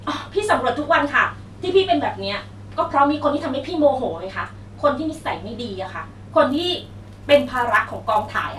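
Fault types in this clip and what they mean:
Resampler restarted on every block: each 10 ms block is converted separately, leaving edge errors that form a 100 Hz buzz under the speech from 6.49 s to the end.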